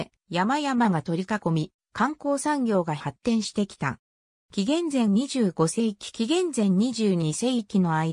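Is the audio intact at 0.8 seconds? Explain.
Yes, the audio is intact at 0.8 seconds, with nothing there to break or disturb the sound.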